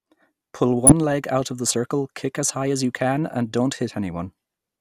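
At 0.87 to 0.92 s, just before "leg out of the", DAB burbling: weak reception let a small fraction of bit errors through into the MP2 data, corrupting a few frames. Short blips of noise land in single sub-bands, giving a burble, unlike a dropout's clean silence.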